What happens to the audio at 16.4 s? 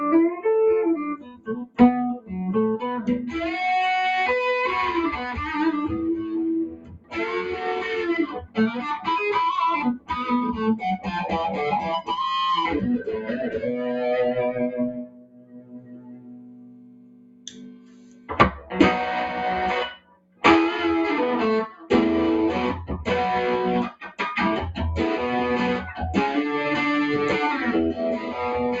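At 16.4 s you're inside a stretch, from 14.91 to 18.74 s, where the noise suppressor cut this sound, treating it as noise and pulling it down as much as about 19 dB. Sustained and decaying parts sink or get chopped short, while sharper hits mostly get through.

That's because a speech-tuned noise suppressor was left on over non-speech sound for the whole clip, swinging the level by something like 20 dB. Steady tones, ambience and tails keep getting ducked, so the audio pumps, flutters or thins out.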